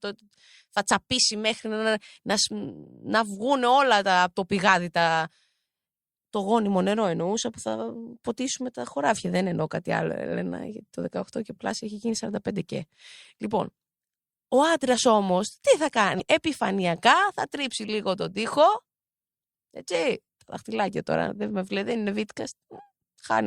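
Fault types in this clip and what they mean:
Damaged data in a compressed stream: a short garbled blip breaks into the speech from 16.16 to 16.21 s, about 50 ms. Corrupted bytes at that point cause the decoder to misread the frames, lose sync, and search for the next valid frame header.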